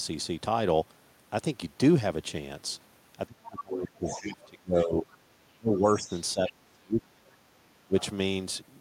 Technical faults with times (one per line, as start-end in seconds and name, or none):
3.26-5.06 speech suppressed in double talk
4.05-4.45 other side's voice leaking through
4.78-5.17 other side's voice leaking through
5.54-7.40 speech suppressed in double talk
5.74-6.50 other side's voice leaking through
7.86-7.95 speech suppressed in double talk
8.00-8.04 other side's voice leaking through